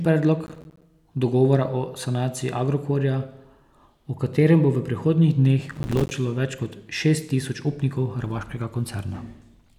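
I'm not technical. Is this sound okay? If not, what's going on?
No, there's processor overload crackle at 0.46–0.83 s and 5.71–6.11 s. The computer kept missing tiny audio deadlines, leaving dozens of brief silent gaps that sound like gritty crackling.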